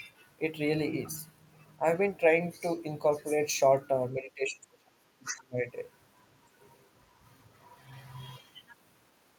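From 4.19 to 5.67 s the speech dips by roughly 25 dB, speech suppressed in double talk, likely an echo canceller turning down this side's voice along with the loudspeaker echo; the waveform thins and spectrogram energy fades.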